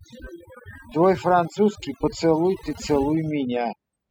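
Speech, marred throughout by overdone noise removal: an over-aggressive noise reducer has gated frequency bands near its noise estimate, so the background drops and breaks up into twinkling artefacts. A spectrogram would show dark, emptied gaps dotted with isolated bright specks.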